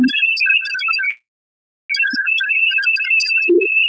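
At 1.10 s packets likely stalled and the jitter buffer ran dry, causing a call audio freeze: a brief fading tail, then silence until 1.92 s, with nothing lost.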